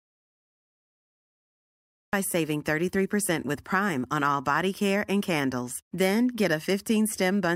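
From the very start until about 2.13 s the speech track is silent, with no room tone at all, before the audio cuts in mid-flow. This audio dropout to silence most likely comes from the input being lost while the recorder kept writing silence.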